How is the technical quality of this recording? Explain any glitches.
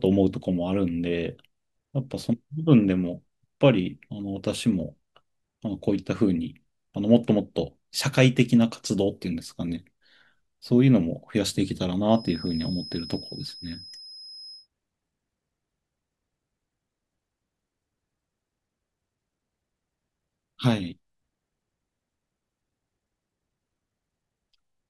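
A thin, steady whistle sits behind the speech from 12.06 to 14.68 s, a single tone near 5.1 kHz, roughly 20 dB below the speech and swelling and fading slowly in level. This feedback whistle is likely from the loudspeaker-to-microphone loop hovering at the point of feedback, so one frequency keeps ringing without building up.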